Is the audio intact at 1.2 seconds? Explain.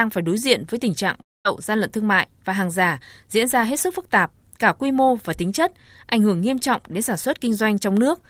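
No, a long network dropout runs from 1.21 to 1.47 s, between "diện với tình trạng" and "gian lận thương mại". The likely cause is a stretch of packets that never reached the receiver, so about 240 ms of the speech is lost. The receiver stretches the last sound into a fading buzz or hiss, which dies away into near silence for roughly 220 ms. The speech then resumes further on, with the missing portion skipped.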